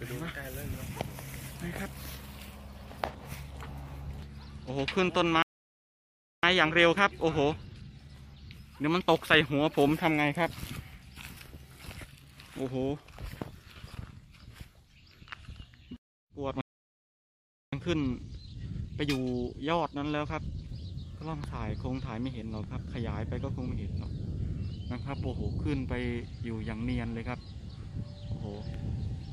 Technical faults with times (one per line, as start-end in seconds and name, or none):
5.42-6.43 playback stall
6.43-9.43 time-compressed catch-up
16.61-17.72 playback stall
17.72-20.72 time-compressed catch-up